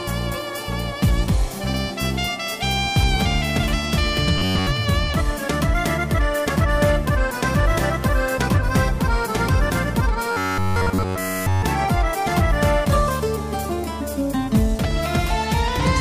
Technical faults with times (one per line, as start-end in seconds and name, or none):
4.38-4.68 robotic sound from repeated short buffers
10.31-11.62 robotic sound from repeated short buffers